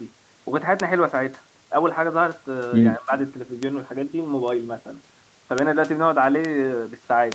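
At 0.80 s a lone sharp tick jumps out of the speech. This is a bit error spike: one flipped bit throws a sample off by a power of two, and it snaps straight back.

From 2.95 to 3.13 s the speech dips by roughly 10 dB. This is likely speech suppressed in double talk, with the echo canceller turning down the talker while the far side was speaking too.

The same brittle, broadband tick returns at 3.63, 5.58, 6.45 and 7.32 s. Each is another bit error spike, one to three corrupted samples that have nothing to do with the speech around them.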